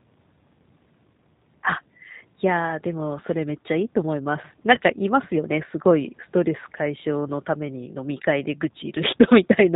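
G.729 coding runs through the whole of this speech recording, at 8 kbit/s. Every 10 ms frame is rebuilt from a vocal tract filter, a pitch predictor and a handful of pulses, so the voice comes out plainly rough and slightly synthetic, and nothing above 4 kHz survives, which leaves it dull and narrowband. VoIP packet loss concealed by the speech codec follows at 4.75 to 4.79 s, where about 20 ms of audio goes missing, which fits a single lost packet. The decoder bridges the gap by extending its last pitch and filter at falling gain, so the sound smears into a brief buzzy tone or coloured noise that fades. Because each frame builds on the one before, the voice stays weak or distorted for a few tens of milliseconds after the audio resumes.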